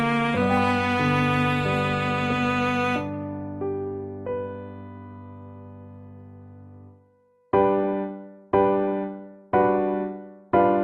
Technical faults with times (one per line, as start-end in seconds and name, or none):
none